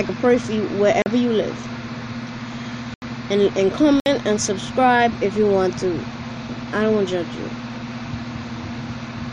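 At 1.02 s the sound drops into a block of digital silence lasting 40 ms, then again at 2.94 s for 80 ms and at 4.0 s for 60 ms. Each time the audio was replaced by zeros, likely because the output buffer was not filled in time, so the audio stops dead with no fade and restarts abruptly. Unlike a concealed dropout or a level dip, these gaps are plain silence with no background, and the longest, at 2.94 s, is heard as a distinct hole.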